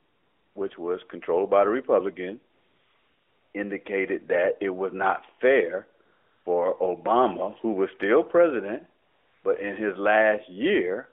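AMR comfort noise appears four times. The sender's voice activity detection judged the line silent and stopped sending speech frames, so the receiver filled each gap with synthetic noise built from a rough level and spectrum estimate. This happens from 0 to 0.6 s before "which was controlled by", from 2.5 to 3.5 s, from 6.1 to 6.5 s after "it was not fair", and from 9.0 to 9.4 s between "who was still president" and "but in his". Each time, the real background gives way to a smooth, steady hiss that switches in and out, within the narrowband AMR-NB call band.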